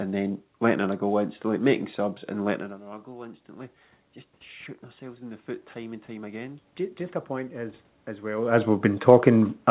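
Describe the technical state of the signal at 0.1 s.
At 0.1 s the signal is intact, with no fault present; only the room's own background noise and the narrowed band of the call path, with nothing above 4 kHz, can be heard.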